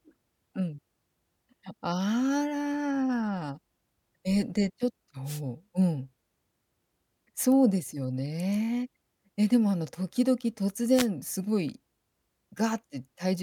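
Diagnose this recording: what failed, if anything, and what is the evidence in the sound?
Wireless microphone noise hits at 5.25–5.41 s and 10.94–11.07 s: brief static bursts where multipath cancellation faded the analogue FM radio link and receiver noise rose.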